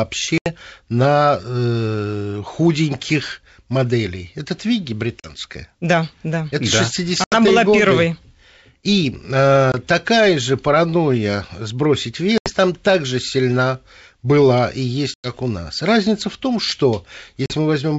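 Packet loss on an ADPCM call hits at 0.38, 5.20, 7.24, 9.72, 12.38, 15.14 and 17.46 s, each a hard-edged silent hole of about 20 to 100 ms, a few packets at most. The longest comes after "также сильна была и", before "у нас". The decoder's predictor and step size lose track of the sender's, so the G.722 wideband speech resumes with brief, slight distortion before settling.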